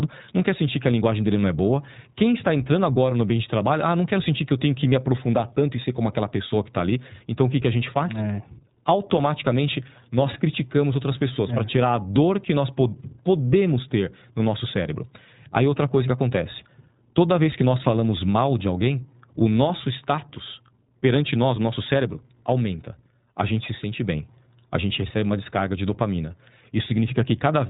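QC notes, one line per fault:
Throughout, iLBC codec: the speech is cut off above 3.8 kHz and has a clearly audible rough, slightly synthetic edge. That comes from coding each 20 ms frame's excitation on its own, which fits iLBC's 15.2 kbps mode.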